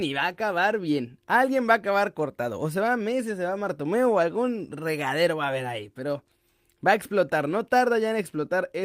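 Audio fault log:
No fault is heard in this speech clip.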